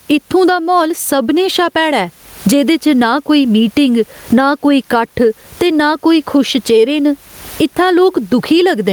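Speech, with gain pumping throughout: the gain swings by about 20 dB, and the room noise sits about 41 dB below the speech. The likely cause is gain set too high with a fast limiter.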